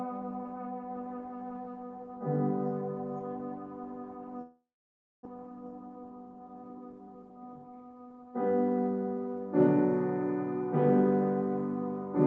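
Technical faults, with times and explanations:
4.41–5.27 s, long network dropout: the sound trails off into a fading buzz, then about 0.58 s of silence before it returns with roughly 0.6 s simply gone. This is likely a stretch where no packets arrived, so the receiver concealed the gap, then gave up.
5.35–7.91 s, jitter buffer speed-up: the audio runs about 7% fast at unchanged pitch and sounds slightly hurried. After the gap, delayed packets piled up in the buffer, and the receiver trimmed short pitch-period pieces, around a fifth of a second in total, to catch up.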